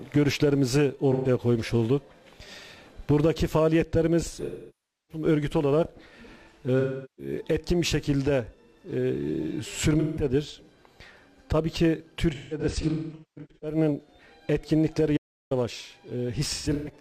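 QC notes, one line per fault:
1.12–1.28 s, 4.44–5.24 s, 6.79–7.33 s, 9.99–10.23 s, 12.34–13.77 s, 16.48–16.93 s: AAC frame loss with concealment. The decoder rebuilds each missing stretch from the last good spectrum, so the audio turns smeared, noisy and phasey instead of going silent. The longer losses, 640 ms at 4.44 s and 384 ms at 6.79 s, decay towards silence and fade back in. From 12.34 s and 16.48 s, shorter gaps are scattered, with runs of around 200 ms and 150 ms.
15.17–15.51 s: audio dropout to silence. For about 0.34 s the sound cuts out abruptly to silence with no room tone, then returns just as abruptly. The likely cause is a lost input while recording carried on writing silence. Unlike concealment, nothing is filled in.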